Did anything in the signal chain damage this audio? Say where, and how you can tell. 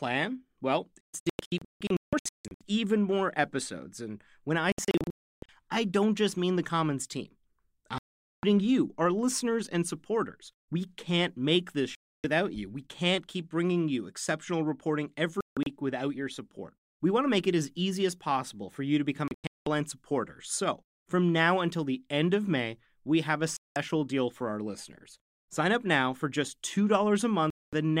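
Yes. The damage is a digital broadcast dropout at the transmission stage: the receiver lost reception or rejected corrupt frames and muted until clean frames returned. The speech cuts to silence at 1.01–2.61, 4.72–5.49, 7.98–8.44, 11.95–12.24, 15.41–15.67, 19.28–19.67, 23.57–23.76 and 27.50–27.73 s. At 1.01 s and 4.72 s the gaps break into several short holes, one lasting 320 ms, and the cuts fall in blocks that point to whole frames being discarded. The missing speech never returns.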